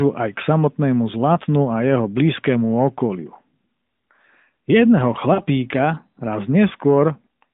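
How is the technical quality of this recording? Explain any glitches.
Two short dropouts break the speech, heard through the narrow band of a phone line that runs from about 150 Hz to 3.7 kHz with only light codec colouring.

From 1.34 to 1.37 s there is a brief dip or warble. From 5.34 to 5.42 s a similar gap lasts about 40 ms, which fits two 20 ms frames. Here the sound smears and sags before recovering, and it returns briefly weak or rough. Both are lost AMR speech frames. Radio errors corrupted the frames, so the decoder filled each gap by repeating the last good pitch and vocal-tract settings at falling gain.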